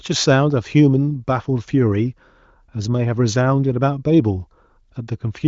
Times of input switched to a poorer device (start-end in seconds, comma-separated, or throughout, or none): none